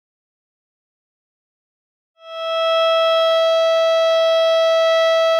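Nothing stood out on listening to this music, which fades in smoothly from around 2 seconds to full level at 2.89 s.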